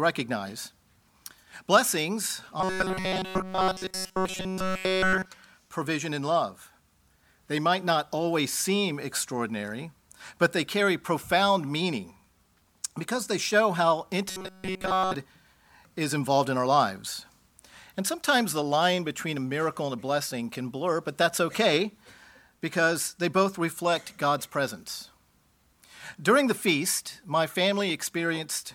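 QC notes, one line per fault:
2.61–5.25 s: robotic sound from repeated short buffers. New audio likely arrived too seldom, so a buffer of about 5 ms was looped almost continuously, imposing a rigid, metallic 188 Hz buzz.
14.29–15.15 s: robotic sound from repeated short buffers. The same likely starved playback looped that short buffer almost entirely, forcing the identical fixed 188 Hz metallic buzz onto the sound.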